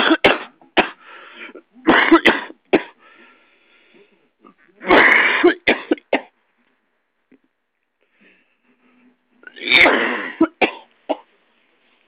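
Nothing goes wrong anywhere in these sounds, so there's no technical fault to point to here.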